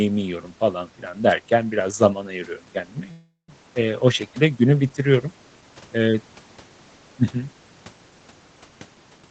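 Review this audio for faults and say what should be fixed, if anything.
From 3.11 to 3.50 s the speech halts. The last sound carries on as a fading buzz for roughly a quarter second and then goes silent for about 130 ms before speech resumes exactly where it stopped. This is a call audio freeze, likely caused by packets stalling in transit until the jitter buffer ran dry. Nothing is lost; about 0.37 s of delay is inserted. Unlike packet-loss concealment, the later speech isn't skipped over. Preventing it means fixing the network stall or giving the jitter buffer more headroom.

Near the very end, from 9.18 to 9.29 s, the speech suddenly rushes at about 192% speed while its pitch stays unchanged. This is a jitter buffer speed-up. The receiver trims short pitch-period slices, roughly 100 ms in total, to work off the delay that built up in the buffer. A resampling error would raise the pitch along with the speed, and that doesn't happen here. 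Smoother packet delivery, or slower and gentler delay reduction, would prevent it.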